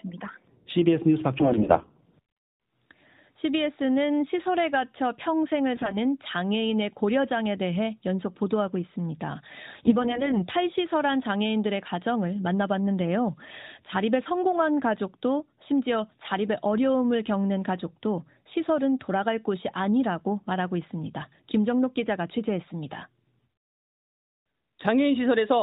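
AMR bit errors hit the narrowband speech at 1.40–1.92 s, 5.76–5.98 s and 9.70–10.46 s. Flipped low-priority bits in frames that still passed their checksum misplaced excitation pulses and skewed gain and spectral detail, so pitch and level hold while the sound turns hoarse and gargly.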